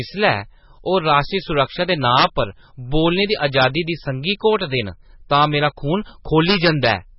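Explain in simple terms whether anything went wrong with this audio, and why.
Integer overflow at 2.19 to 2.24 s, 3.61 to 3.65 s, 5.43 s and 6.49 to 6.89 s: the loudest moments of the speech exceed the largest number the system can store. Instead of stopping at that ceiling, they wrap around to the opposite extreme, which makes harsh, violent cracks.

MP3 compression, heard throughout: the speech sounds watery, with nothing above 5.6 kHz. This likely comes from squeezing the file too hard. The encoder discards the treble and keeps flicking faint detail on and off, which makes the sound swirl.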